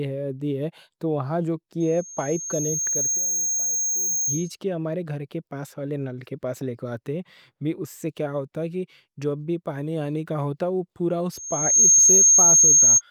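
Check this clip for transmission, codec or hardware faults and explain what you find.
Loudspeaker feedback squeal occurs twice. The microphone is picking up its own loudspeaker, and at 6.4 kHz the loop gain exceeds one. From 1.8 to 4.56 s a thin tone swells over roughly a second and a half to a bit above the speech. From 11.32 to 13.02 s it surges within about half a second to well above it.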